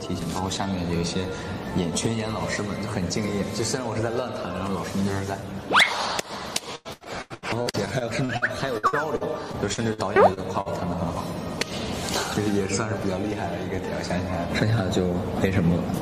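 From 6.75 s to 10.68 s the stream suffers repeated packet loss (robotic sound): packets keep arriving late or not at all, and the receiver patches each hole by stretching the last sound it had. About a fifth of that stretch, roughly 0.86 s in total, is filled this way, and the longest single gap is 95 ms. The result is a choppy, robotic texture, with some pieces of the sound simply dropped.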